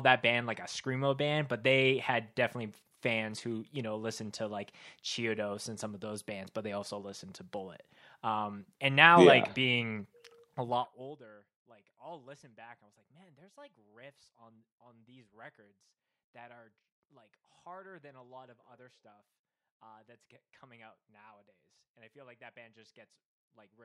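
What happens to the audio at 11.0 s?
A rapid ticking, zipper noise, rides on the speech from 10.57 to 11.22 s, between "like being" and "like I'll listen back", as the level falls by roughly 25 dB. The gain drops in coarse unsmoothed steps, around 70 a second, each leaving a small click.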